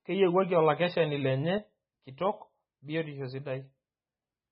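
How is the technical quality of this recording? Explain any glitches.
The recording's technical quality is poor, with two faults.

MP3 compression is audible throughout the speech. Nothing reaches above about 5.4 kHz, so the top end sounds dull. Heavy codec damage adds a watery, swirling texture as weak frequency lines drop in and out between frames, and s sounds and consonant attacks are smeared. This likely comes from a starved encoder, consistent with a very low bitrate around 16 kbps.

A sudden gain jump occurs at 1.58 s, right after "okakeshani lenye". The level falls by about 6 dB in a single step and stays down to the end, with the voice and the background noise dropping together. This is likely a digital gain change applied without a ramp.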